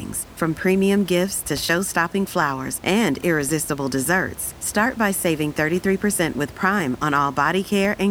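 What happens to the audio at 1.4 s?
At 1.4 s the speech comes through intact, with only the room's background noise, about 21 dB below the speech, sitting underneath it.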